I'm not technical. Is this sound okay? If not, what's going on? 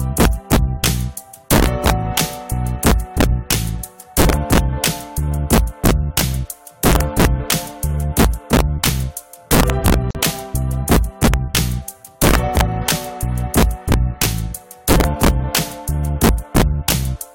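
No, there are two problems.

The first is integer overflow, and it runs through the whole clip. The level was pushed higher than the system's numbers can go, and instead of being held at the maximum, the loudest peaks wrapped around to the opposite extreme. That happens on only a small share of the sound, the very loudest instants, but each one becomes a harsh, violent crack, much sharper and nastier than ordinary distortion.

The second is a gap at a join of encoded pieces, from 10.11 to 10.15 seconds. The audio was compressed in separate chunks and then stuck together without trimming the bit of silence each chunk carries at its edges. The result is a sudden dropout of about 44 milliseconds, a brief hole with softened edges, after which the sound picks up exactly where it left off.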